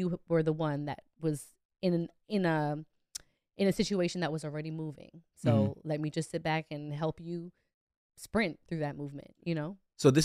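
Speech recording with no audible technical faults anywhere.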